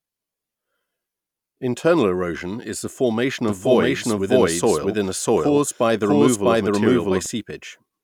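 Speech, with a doubled audio track from 3.48 s to 7.26 s: a second full-band copy at about the same level trails the original by roughly 0.7 s, dry and without decay, starting and stopping abruptly, likely from a second, slower capture path.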